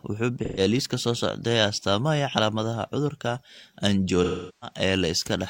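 Between 0.39 and 0.60 s the speech turns briefly smeared and noisy, the mark of AAC frame loss with concealment. About 128 ms of coded audio went missing, consistent with three frames, and the decoder covered the gap by reusing the last good spectrum. A longer loss, about 384 ms, runs from 4.23 to 4.77 s. Here the concealment cannot sustain the substitute, so the sound decays toward silence before fading back in.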